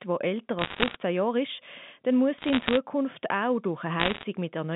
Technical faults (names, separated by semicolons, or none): bit errors on a digital phone line